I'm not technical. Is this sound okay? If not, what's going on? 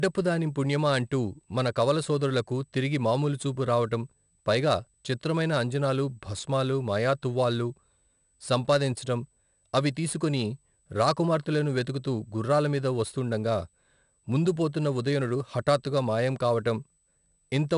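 No. Power noise from a USB connection is leaking into the recording, producing USB whine: a faint, steady high-pitched tone at 8 kHz running through the entire clip.

The speech was also stored with 4-bit ADPCM compression, a crude shortcut that saves space by recording rough steps. It adds a plainly audible gritty hiss over the voice and leaves it dull, with nothing above about 10.6 kHz.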